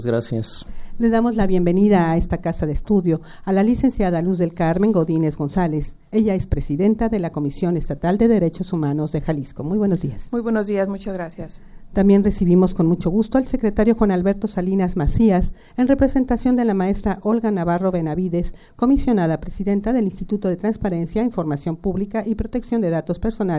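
No technical faults can be heard in this recording.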